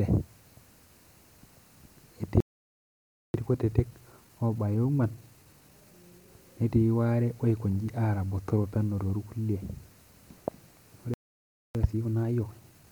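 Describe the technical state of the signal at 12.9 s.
At 12.9 s the signal is in a time-compressed catch-up, running from 11.75 s to the end of the clip at 12.92 s. Having fallen behind after a stall, the player discards short slices of the backlog and cross-fades across each gap, so the speech plays about 1.25 times faster while holding its normal pitch. The result sounds rushed.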